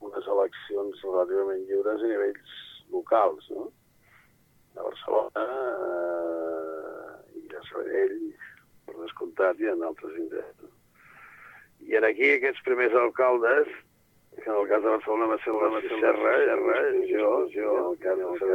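From 15.54 s to the end, there's a doubled audio track: a second, full-band copy of the same audio trails the original by roughly 0.4 s at around 5 dB down. It cuts in abruptly, with no fade, decay or room colour, so it reads as a clean duplicate rather than an echo. The likely cause is the signal being captured again through a slower path, or an edit that left two copies stacked out of step.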